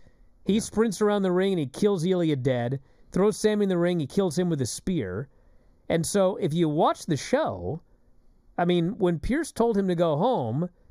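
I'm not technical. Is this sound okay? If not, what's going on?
No. Throughout the whole clip there is channel delay (comb filtering). One of the two stereo channels arrives a tiny fraction of a millisecond late, and when both are mixed together some frequencies cancel each other out. The first gap falls at around 3 kHz, right where much of the clarity and presence sits, with more gaps evenly spaced above it. That's why the sound comes across hollow and phasey.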